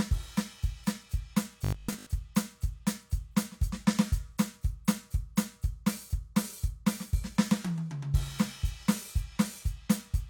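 A short music clip with one fault. From 1.65 to 2.07 s the music collapses into a rigid, metallic buzz with a fixed pitch of 50 Hz. This is robotic sound from repeated short buffers. The likely cause is new audio arriving too seldom, so playback keeps looping the last 20 ms chunk to fill the gaps. That repeat length sets the 50 Hz tone. Around 70% of this stretch is repeated material, so most of the real music there is skipped.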